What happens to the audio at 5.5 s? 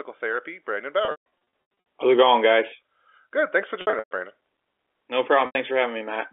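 From 5.46 to 5.55 s, about 90 ms of audio was lost in transit, which fits three dropped packets, and the receiver covered it with packet loss with pitch repetition, looping the last pitch period. The buzzy held tone fades toward silence before speech cross-fades back in.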